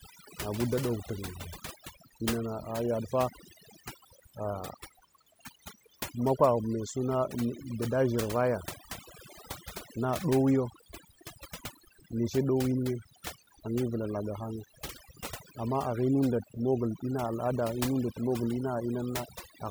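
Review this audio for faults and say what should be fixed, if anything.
Overdone noise removal affects the speech from start to finish. The noise reduction was pushed so hard that individual frequency bands are cut almost to nothing whenever they sit close to its noise estimate, taking the quieter parts of the voice with them. In the pauses the background drops and breaks up into twinkling specks. On a spectrogram the background shows as a dark field scattered with isolated bright dots, and the harmonics look ragged and broken up, with their weaker edges missing. Setting the reduction gentler, and checking the result by ear against the untreated recording, would prevent this.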